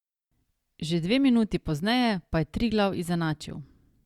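No faults can be heard.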